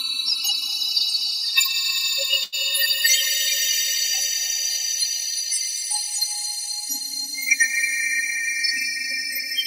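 A short stall from a late packet occurs at 2.43 to 2.55 s: the jitter buffer ran dry, so the last sound was stretched about 91 ms with a faint buzz or dip, then resumed with nothing lost.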